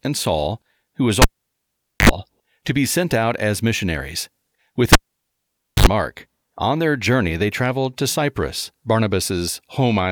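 A live cable was pulled out and plugged back in twice. From 1.22 to 2.09 s, just after "who was", a pop drops the speech to near silence for 0.82 s. A 66 ms burst of 50 Hz mains buzz follows while only the plug tip makes contact, then another pop as "to be sent out" returns. From 4.93 to 5.87 s the same thing happens, with 0.89 s of silence and a 69 ms buzz.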